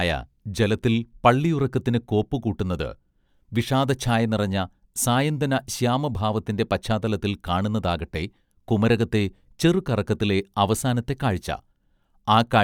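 Listening to the recording, nothing stood out as a technical fault at any point.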